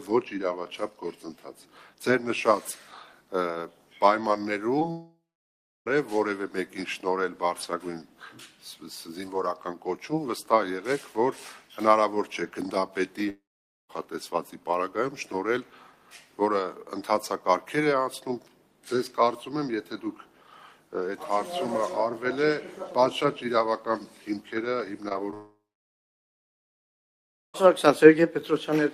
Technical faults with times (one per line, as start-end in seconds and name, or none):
4.79-4.83 short concealed packet loss
4.91-5.88 long network dropout
13.30-13.91 long network dropout
25.09-25.34 short concealed packet loss
25.34-27.67 long network dropout